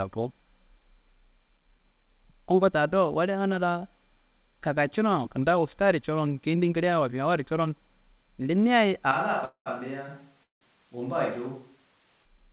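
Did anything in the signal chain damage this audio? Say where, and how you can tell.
Yes. From 9.11 to 12.25 s the sound turns roomy and hollow. Bass thins, the level drops about 5 dB, and room noise rises. Both transitions are abrupt. The likely cause is a switch to a distant microphone at the capture stage.

Two call audio freezes occur, at 9.45 to 9.68 s and 10.43 to 10.63 s. Each starts as a fading buzz or hiss, then falls silent for 100 and 150 ms. The sound resumes where it stopped, so nothing is lost. The likely cause is network delay draining the jitter buffer.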